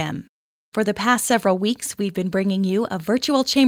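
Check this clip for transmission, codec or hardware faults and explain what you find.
Nothing to flag here; I listened closely and didn't hear any transmission, codec or hardware problem anywhere in this short bit of speech.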